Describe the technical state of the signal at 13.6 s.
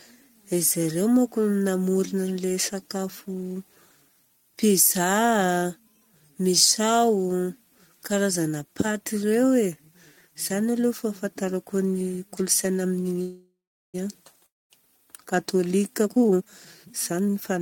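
At 13.6 s you're inside a call audio freeze, 13.21 to 13.96 s: likely a starved jitter buffer, so the last sound fades into about 0.4 s of silence, then resumes intact.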